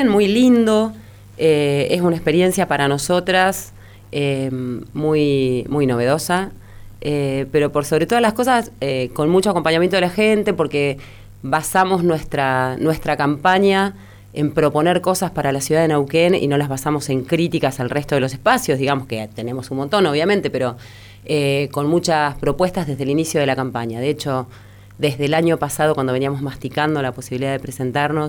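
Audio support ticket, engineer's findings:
No audible fault found on listening. No component implicated, so no audio-side action is needed on this ticket.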